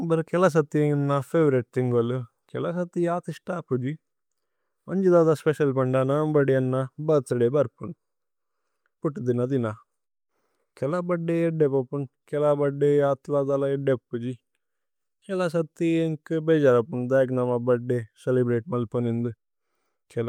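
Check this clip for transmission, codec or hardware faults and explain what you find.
Nothing in this speech recording stands out as a fault, so there's nothing to report.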